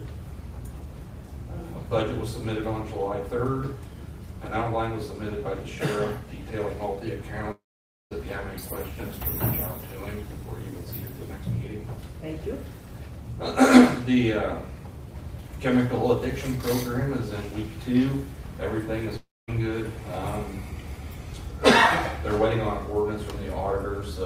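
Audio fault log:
7.51–8.13 s and 19.17–19.50 s, long network dropout: incoming audio likely stopped arriving for about 0.6 s and 0.32 s. The receiver stretched the last sound into a brief fading buzz, then silence for about 0.52 s and 0.23 s, and the audio resumes with those stretches missing.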